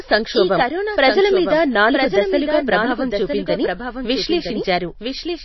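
From the start and throughout, every stretch of speech returns about a second later, roughly 5 dB quieter, dry and full-band. This is a doubled audio track, likely from the same audio being captured again by a slower path or an edit holding two copies out of step.

Over the whole clip the speech also sounds plainly watery and swirly, with smeared attacks and nothing above 5.8 kHz. That is MP3 compression, likely at a very low bitrate of around 24 kbps, where weak frequency lines drop in and out and the treble is cut.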